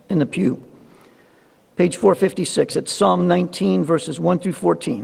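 Nothing here calls for comment, since the audio runs its whole course without a single technical fault turning up along the way.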